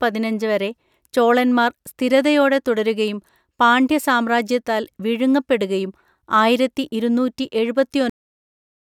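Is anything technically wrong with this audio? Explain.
Yes, the speech has a cut-off end at 8.1 s: the final buffers never reached playback, so sound halts mid-utterance into digital silence, abruptly and without decay, unlike a fade-out or natural ending.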